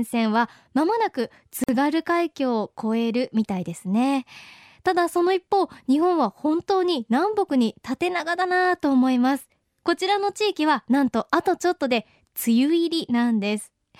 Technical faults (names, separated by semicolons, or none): gap at a join of encoded pieces